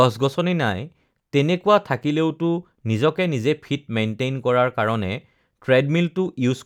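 Listening closely to the speech turned up nothing that stood out as a technical problem.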